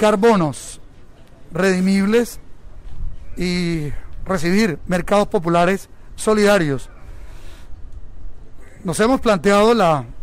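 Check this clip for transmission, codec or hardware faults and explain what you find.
There's one hardware fault, sample clock jitter, from 7.24 s to the end. The converter's clock wobbles by a few microseconds, so fast-moving loud and bright passages pick up a gritty hiss roughly 35 dB down.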